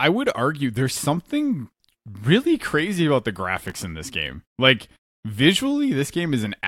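Between 3.57 and 3.82 s, after "really crazy about the", processor overload crackle: missed buffer deadlines repeat old audio, causing gritty tearing and dense vertical spectrogram streaks.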